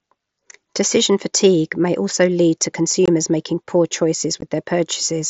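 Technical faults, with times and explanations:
3.06–3.08 s and 4.41 s: unconcealed Bluetooth headset packet loss. Lost mSBC packets become holes of 22.5 and 15 ms, filled with silence or an idle pattern. The spectrogram shows vertical slots with abrupt edges.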